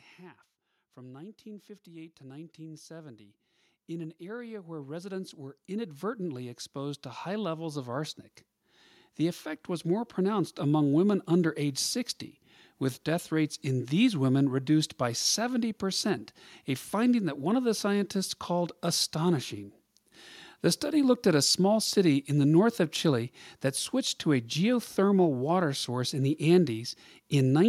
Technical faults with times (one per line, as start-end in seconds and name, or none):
0.16-11.70 automatic gain rising